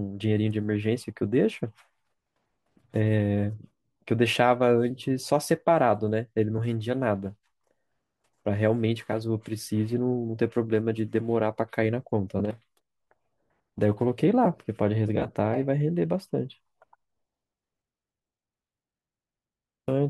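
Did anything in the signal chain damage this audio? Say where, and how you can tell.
No, nothing in the chain has left an audible mark on this speech recording at any stage.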